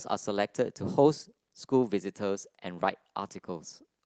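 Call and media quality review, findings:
No audible faults found.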